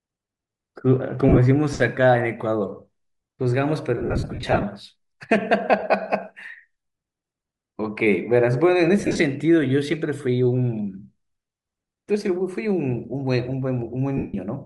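Speech with Bluetooth LC3 compression throughout: a breathy, grainy edge sits on the upper frequencies. This is likely LC3 at a moderate bitrate near 48 kbps, zeroing much of the upper spectrum and filling it with noise. Lost LE Audio frames appear at 1.29–1.39, 3.97–4.64, 5.79–5.83, 9.00–9.19 and 14.17–14.34 s. In each, the decoder repeats the last spectrum with scrambled signs, so the sound smears into noise. The longest gap, at around 4 s, breaks up in short dropouts.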